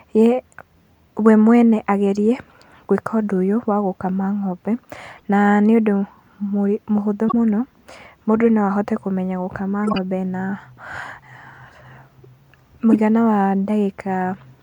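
The clip is speech with two kinds of technical fault. The first is a corrupt frame decoded, heard three times: at 5.17 to 5.22 s, 7.28 to 7.34 s and 12.93 to 13.00 s. Damaged bits in the compressed data were decoded anyway. Misread values put energy at the wrong frequencies. Each event lasts only a few frames. The first is faint. The second and third are loud, and the last is longer, spanning about four frames. The second fault is compressed frames skipped, at 9.78 to 9.98 s, just after "no ahote kũmenya gũkama". Some frames never reached the output. The audio jumps ahead by a few tens of milliseconds.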